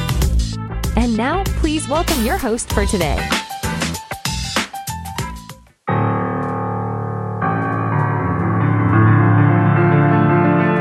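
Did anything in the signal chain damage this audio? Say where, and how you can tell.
Yes. At 3.17 s the driver's input likely switched to a poorer device: the spectrogram goes blank above 13 kHz and a faint new noise floor appears, with no gap or level step.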